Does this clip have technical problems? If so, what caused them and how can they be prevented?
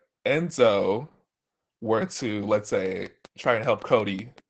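Yes. Opus voice compression is audible throughout the speech: it sounds muffled, slightly hoarse and faintly robotic. That fits a bitrate around 12 kbps using Opus's SILK linear-prediction coder in wideband mode, which models the voice coarsely and discards the top of the band. On a spectrogram the energy stops sharply at about 8.8 kHz, and the harmonics look smeared and blocky. Recording or transmitting at a higher bitrate would prevent it.

A train of clicks runs from 2.86 to 4.39 s, starting just after "were to let's". There are roughly ten similar clicks at a regular pace of 5.25 per second, peaking roughly 5 dB above the speech and audible as steady ticking. The likely cause is electrical interference from nearby equipment or a faulty connection or power supply injecting pulses. A waveform shows evenly spaced sharp spikes, and a spectrogram shows thin full-height vertical lines. Shielding the cables and checking the interface and its drivers would prevent it.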